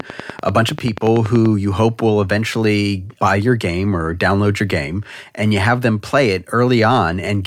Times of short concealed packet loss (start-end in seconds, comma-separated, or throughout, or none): none